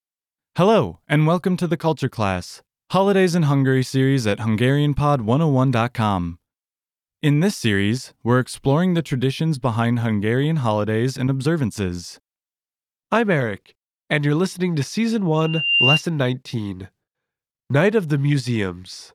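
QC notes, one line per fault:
15.36–16.03 s, loudspeaker feedback squeal: a pure tone near 2.8 kHz rises out of the speech, swelling over just under half a second until it sits about 5 dB above the voice, then stops. The microphone is hearing the loudspeaker it drives, and at that one frequency the loop gain tops unity, so each pass round the loop reinforces the tone until it dominates.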